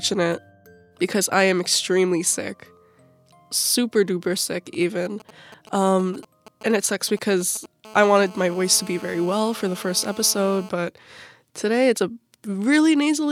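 From 4.74 to 7.66 s, GSM signalling bursts: a nearby 2G phone's intermittent radio bursts are rectified in the audio circuit, adding galloping ticks and brief 217 Hz buzzes, roughly 20 dB below the signal. From 7.85 to 10.69 s comes GSM phone buzz: the phone transmits in bursts 217 times a second during a call, producing a steady, raspy 217 Hz buzz rich in harmonics, about 20 dB down.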